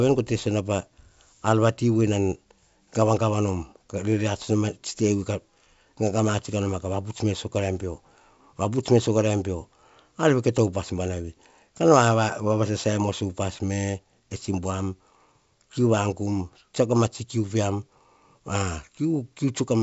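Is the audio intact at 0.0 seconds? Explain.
Yes, the audio is intact at 0.0 s, with the sound carried through 64 kbit/s G.722 wideband telephone coding and its content stopping below about 7.7 kHz.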